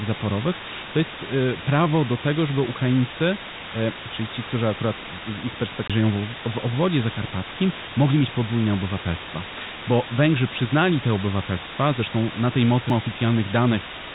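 Low bit depth with dither runs throughout the whole clip. The speech is carried on only 4 bits, and dither turns the rounding error into a constant, even hiss roughly as loud as the speech itself.

CD skip occurs at 5.88 to 5.90 s, after "którzy akurat z ich", and again at 12.90 s, after "te obywatelstwa zresztą na". The laser jumps to another turn of the spiral, so the sound mutes briefly, for about 20 ms the first time and a few milliseconds the second. Playback then resumes from a different point in the recording.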